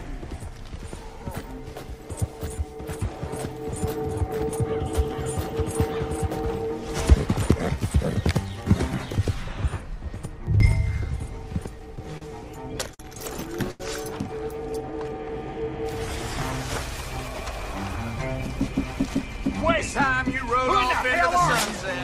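At 12.17–12.24 s, 12.94–13.02 s and 13.71–13.83 s come three short stalls from late packets. Each time the jitter buffer ran dry, and the last sound was stretched by 39, 50 and 84 ms before playback resumed. Each is heard as a briefly held sound with a slight buzz or dip, and a spectrogram shows a short run of frozen, repeated harmonics.

From 14.81 to 15.29 s a jitter buffer slow-down repeats pitch periods to rebuild the reserve. It adds 41 ms and plays at 93% speed with the pitch unchanged, so the sound is drawn out. The waveform shows duplicated cycles.

From 17.28 to 18.48 s a jitter buffer speed-up trims pitch-period pieces to cut the excess delay, removing about a tenth of a second at 108% speed. The sound is hurried but keeps its pitch, and the spectrogram shows compressed timing with harmonics unshifted.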